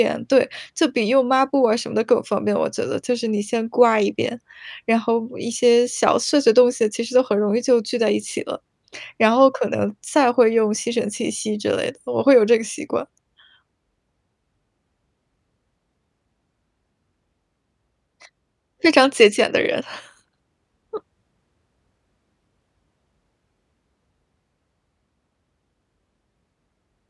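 Speech recording with no technical faults detected anywhere in it.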